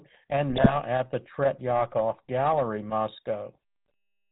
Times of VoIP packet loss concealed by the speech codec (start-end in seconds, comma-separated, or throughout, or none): none